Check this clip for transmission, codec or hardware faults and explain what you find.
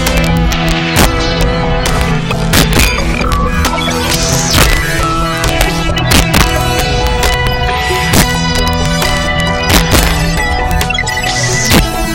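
Violent cracks break out on the loudest peaks throughout the clip: integer overflow. The signal is driven about 4 dB past the integer limit, so the roughly one percent of samples that exceed it wrap to the opposite extreme instead of being held, which is far harsher than clipping.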